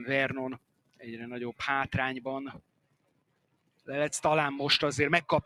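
A noise suppressor built for speech was left running on this audio, so its gain keeps swinging by around 20 dB depending on what it mistakes for noise. That is the noise suppressor applied to music or sounds: sharp onsets pass mostly intact, but anything sustained or decaying gets pulled down. The result is a pumping, fluttering level across the whole clip, with tails that shrink away and a thinned, hollow body wherever the sound holds steady.

From 0.58 to 1.05 s, the suppressor judged the sound to be noise and clamped it hard, dropping it by about 21 dB for roughly half a second. This is sound cut by the noise suppressor: the held part sinks and its decay is chopped short. From 2.52 to 3.88 s the same thing happens over a longer stretch, about a second and a half in total, again reaching about 21 dB down.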